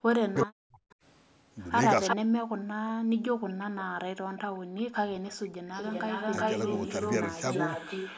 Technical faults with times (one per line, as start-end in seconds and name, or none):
0.00-5.64 speech suppressed in double talk
0.34-2.16 echo leak
2.69-4.50 background gated by the echo canceller
4.37-8.17 echo leak